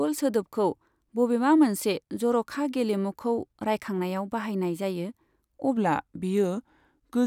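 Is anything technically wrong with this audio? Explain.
Yes. From 5.77 s to the end, a section at the wrong speed: the speech slows to about 0.89 times its original rate, likely from playback against the wrong clock. Pitch drops about two semitones along with the tempo, unlike a plain pitch shift, which leaves the timing intact.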